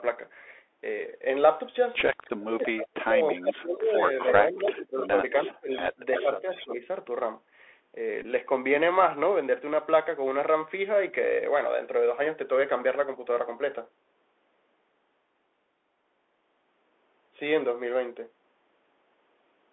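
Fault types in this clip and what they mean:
Bluetooth CVSD headset codec: The one-bit narrowband headset codec confines the sound to about 300 Hz to 3.5 kHz throughout, with plainly audible scratchy, granular coding damage.
Bluetooth headset packet repeated: Lost headset packets are filled by replaying old ones. This causes brief ticks or buzzy blips at 2.00 s, lasting 7.5 ms, and at 8.22 s, lasting 18.8 ms.
Speech suppressed in double talk: The speech dips sharply, at worst by roughly 35 dB, around 2.3 to 6.8 s. This is likely an echo canceller ducking during overlapping talk.
Echo leak: A delayed copy of the speech, about 340 ms late and somewhat quieter, surfaces in scraps and longer stretches between 3.3 and 6.7 s. This is likely loudspeaker echo the canceller missed.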